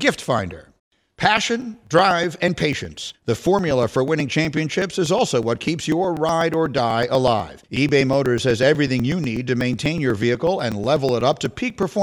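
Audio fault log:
0.14–11.95 s: periodic USB or driver dropouts, about 2 ms skipped every 0.123 s, giving regular ticks during speech; the waveform shows evenly spaced splices and the spectrogram shows thin vertical broadband lines.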